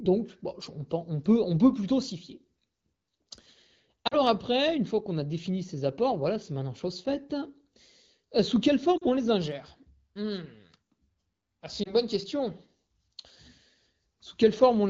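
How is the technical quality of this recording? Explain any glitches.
The speech carries three short glitches from lost AMR speech frames, heard through HD Voice (AMR-WB) coding that sounds light, consistent with about 12.65 kbit/s.

The first falls at 4.07 to 4.19 s, just before "après une fois qu'on". The second is at 8.98 to 9.04 s, between "sous quelle" and "on les ingère". The third is at 11.83 to 11.93 s, before "bonne question". Radio errors corrupted roughly 40 ms of frames in each of the first two and 20 ms in the third. The decoder filled the gaps by repeating the last good pitch and vocal tract settings at a falling level, so the first two drop to near silence and the third is a brief warble or dip, each with a weak or rough restart. That smeared, held continuation is what separates it from a plain dropout, which would cut to hard silence.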